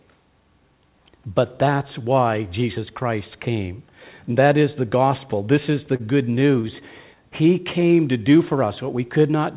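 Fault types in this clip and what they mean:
Repeated stalls (stutter): after "is the", 5.96–6.79 s, six brief underruns (longest 32 ms) are bridged by continuing prior sound, appearing as short repeated, smeared frames on a spectrogram.
Jitter buffer slow-down: from 7.64 to 8.19 s, just before "do for", repeated pitch periods add 64 ms. Speech runs at 90% speed with unchanged pitch, showing stretched harmonic bands on a spectrogram.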